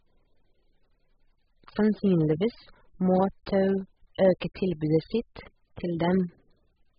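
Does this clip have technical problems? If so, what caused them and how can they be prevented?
Yes. Throughout, the speech is dull, with nothing above 5.1 kHz and a heavily smeared, warbling texture, likely from AAC compression at a very low bitrate, around 8 kbps. Encode at a higher bitrate to prevent this.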